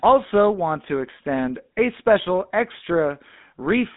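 Throughout, the speech shows plainly audible GSM full-rate codec damage. Pulse-excited vocal-tract coding, consistent with about 13 kbps, leaves a buzzy, gravelly roughness and nothing above 3.8 kHz.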